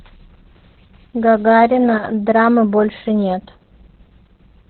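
Speech clip carrying heavy Opus voice compression throughout: SILK narrowband coding at what sounds like about 8 kbps leaves it muffled, hoarse and slightly robotic, with a spectrogram showing nothing above 4.2 kHz.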